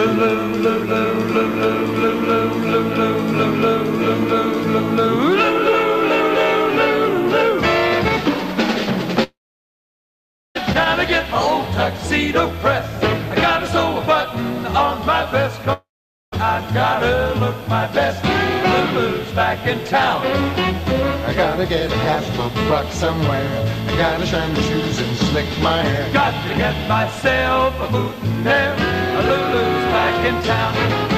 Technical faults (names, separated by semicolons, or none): long network dropout